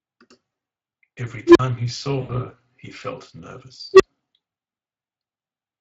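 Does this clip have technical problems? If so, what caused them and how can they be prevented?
Yes. Speex codec damage runs through the whole speech clip: a noisy, hoarse grain from too few bits for the excitation, which points to a bitrate of around 20 kbps. To prevent it, use a higher Speex quality setting or a modern codec such as Opus.

An unstable filter appears twice. From 1.47 to 1.59 s, a low tone near 300 Hz swells over about 85 ms, clips, then drops into 41 ms of silence when the filter overflows, until it resets. From 3.94 to 4.03 s, a tone near 400 Hz builds over 62 ms, followed by 31 ms of silence. To prevent it, validate coefficients for stability before loading them and reset filter state when output overflows.

VoIP packet loss concealed by the speech codec occurs from 2.21 to 2.32 s. About 80 ms of audio went missing, which fits four 20 ms frames. The decoder extended the last pitch and filter into a fading fill, and the sound stays weak briefly afterwards. 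To prevent it, add forward error correction or redundancy and a suitably sized jitter buffer.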